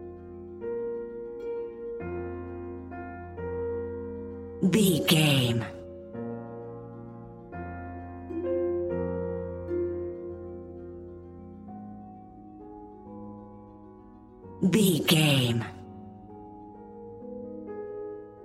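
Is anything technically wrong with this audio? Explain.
No, there's nothing technically wrong to point to here; it all sounds perfectly fine.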